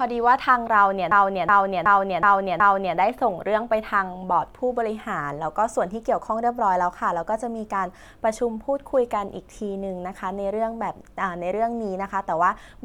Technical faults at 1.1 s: system hang loop

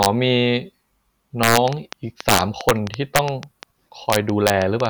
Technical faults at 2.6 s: train of clicks; integer overflow

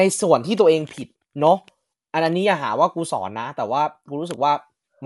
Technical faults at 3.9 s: Dolby Digital compression

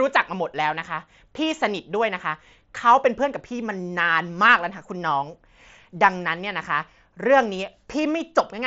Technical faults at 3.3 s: none

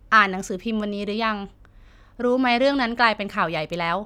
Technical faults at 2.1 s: none

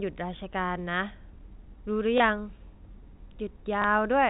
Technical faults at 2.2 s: packet loss with last packet repeated

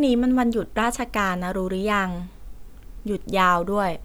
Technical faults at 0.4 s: none

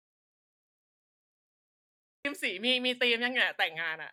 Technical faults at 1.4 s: audio dropout to silence

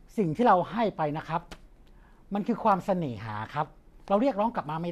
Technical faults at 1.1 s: none

